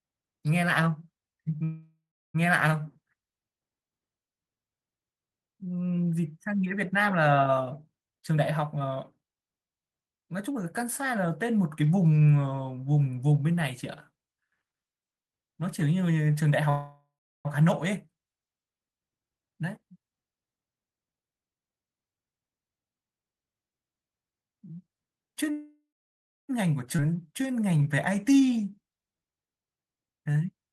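A speech recording with a recurring pattern of call-transport faults. There are three call audio freezes, at 1.63–2.36 s, 16.69–17.47 s and 25.51–26.51 s. In each, the last sound is carried on as a fading fill and then drops to silence for about 0.33 s, 0.34 s and 0.64 s respectively. When the sound resumes it picks up exactly where it stopped, so nothing is lost but 0.71 s, 0.75 s and 0.98 s of extra delay are inserted. That behaviour is most likely packets stalling in transit and the jitter buffer running dry. Two jitter buffer speed-ups follow the accumulated delay, at 8.06–10.73 s and 19.51–22.99 s. The receiver trims short pitch-period slices repeatedly to shed roughly 0.7 s of backlog each time. Playback runs at 127% and 122% of normal speed with pitch unchanged, so the speech sounds rushed rather than higher. At 26.97–27.00 s there is a skip ahead: around half a second of audio is dropped and the two sides are spliced with only about 11 ms of fill. 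The jump is abrupt, and that stretch of content is gone rather than delayed. Immediately after, from 27.00 to 29.32 s, a jitter buffer slow-down repeats single pitch periods and pause fragments to rebuild a reserve, adding 0.29 s. Playback runs at 88% speed at the original pitch, so syllables are drawn out and may carry a slight warble.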